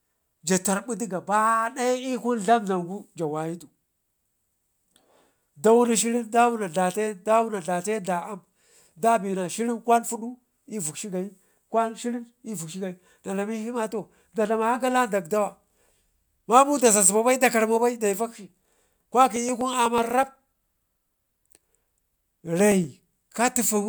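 Speech with periodic USB or driver dropouts from 19.36 to 22.97 s: tiny skipped slivers, about half a millisecond each, repeating every 0.124 s, about thirty times, as regular ticks, unlike random crackle.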